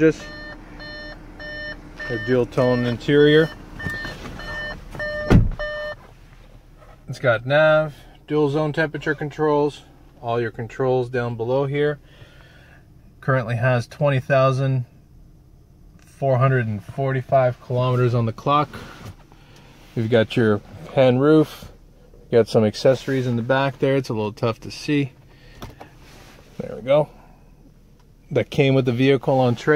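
No technical fault can be heard anywhere in this audio. There is nothing to place in time and no cause to trace.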